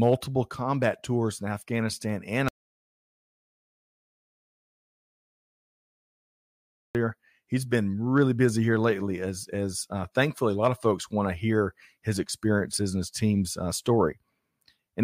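From 2.48 to 6.95 s an audio dropout to silence cuts the speech for about 4.5 s, likely lost input, showing as a flat waveform and blank spectrogram.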